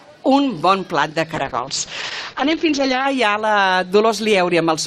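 At 1.37 s there's a call bitrate drop. The bandwidth estimate collapsed, so the encoder coarsened and lost everything above 8 kHz. The sound goes muffled and watery, consistent with a fall from roughly 48 to 8 kbps, until it recovers at 3.13 s.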